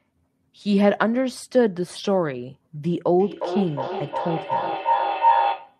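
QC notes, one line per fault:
3.20–5.80 s, feedback howl: a microphone-to-loudspeaker loop gains level each pass, so the repeats swell into a tone around 1 kHz. Its repeats come roughly every 0.4 s, and it reaches about speech level. The spectrogram shows a bright horizontal line, and the waveform envelope swells to the end.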